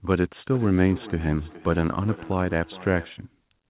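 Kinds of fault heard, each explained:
Feedback echo between two devices: from 0.53 s to 3.24 s the speech returns roughly every 0.4 s. A second device in the room replays the call and its microphone picks that up again, and neither echo canceller removes the other's playback. The strongest repeat sits about 18 dB below the direct speech, thinner and ringing. On a spectrogram, faint copies of each syllable trail at regular spacing, all cut off at 4 kHz as in narrowband telephone audio. The waveform shows small decaying bursts after each one.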